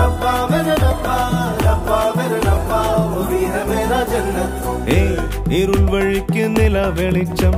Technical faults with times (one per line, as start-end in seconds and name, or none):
6.32-7.56 train of clicks